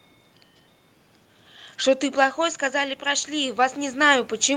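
From 2.35 s to the end at 4.57 s there is automatic gain rising. Shortly after the talker moves away at around 2 s, the level reaching the microphone drops by about 9 dB, and the automatic gain control responds by slowly raising its gain. The room noise swells along with the voice, so the background becomes steadily more prominent as the level climbs back over roughly two seconds.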